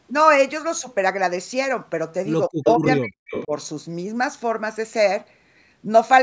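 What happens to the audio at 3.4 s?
The echo canceller likely confused double talk with echo and turned the talker down from 2.49 to 3.53 s, so the speech drops out in pieces by roughly 40 dB, about half a second in total. An echo leak, likely from an incompletely cancelled loudspeaker path, lets a copy of the speech delayed by 232 ms through from 3.29 to 3.46 s, roughly 10 dB below it.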